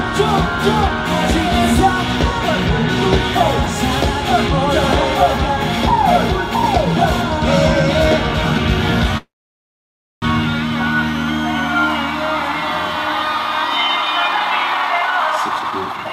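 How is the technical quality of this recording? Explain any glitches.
Two network-related glitches affect the recording, one near the middle and one at the end.

From 9.17 to 10.24 s there is a call audio freeze. The sound stops briefly, and about 0.95 s of that stretch is silent. It then resumes exactly where it left off, so roughly 1.05 s of gap has been inserted without anything being lost. This is likely packets stalling in transit: the jitter buffer drained, the receiver extended the last sound briefly and then went quiet.

From 13.87 s to the end, at 16.10 s, there is a jitter buffer speed-up. The audio plays at about 139% of its normal rate while keeping its original pitch, so it sounds noticeably rushed. The buffer was holding more audio than its target. The receiver caught up by repeatedly cutting out short pitch-period-sized slices, shedding roughly a second of delay over those final two seconds.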